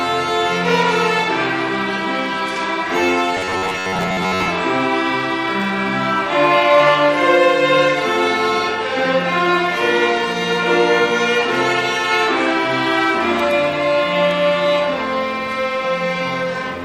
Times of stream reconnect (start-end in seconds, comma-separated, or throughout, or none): none